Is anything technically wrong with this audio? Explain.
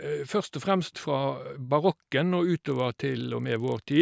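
Yes. From 2.48 s to the end, a resampler restarted on every block leaves a 25 Hz buzz, each 40 ms block edge erring slightly. Unlike mains hum, it stops when the signal stops.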